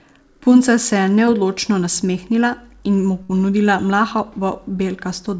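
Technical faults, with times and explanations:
1.26–1.29 s, short concealed packet loss: Right after "se je" and just before "nasmehnila in mu ponudila", about 20 ms of the call failed to reach the decoder in time. The receiver bridged the hole with roughly 12 ms of synthesized continuation, extending the preceding sound, then crossfaded back into real audio. The result is a brief smear or wobble, with a sliver of the original sound lost rather than repaired.
3.23–3.31 s, burst of packet loss: Following "nasmehnila in mu", a run of about 60 ms never arrived or came too late to play. The receiver stretched the last sound across about 59 ms of the gap, fading it as it went, so it sounds like a short held buzz or fading hiss instead of the real continuation. Playback then resumes further along, and everything in that stretch is simply absent. Nothing is heard above 8 kHz, consistent with a wideband call codec.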